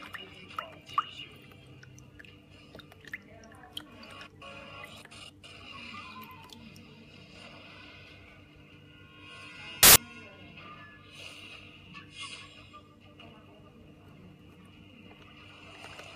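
At 9.83 s there's a burst of loud, harsh broadband noise lasting about 0.13 s, to 9.96 s. That's samples built from the wrong bytes: the reader slipped its byte alignment or order, so the jittery low bits landed in the top of each value and swamped the sound.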